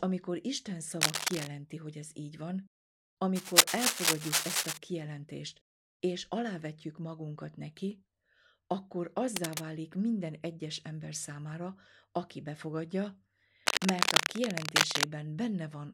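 It's speech with cable scratch noise: rough rustling bursts, mostly a bit louder than the speech, at 1.01–1.47 s (right before "hogy ez így van"), 3.35–4.78 s, 9.36–9.61 s (right before "minden egyes ember számára") and 13.66–15.05 s, likely from a worn cable or connector being moved.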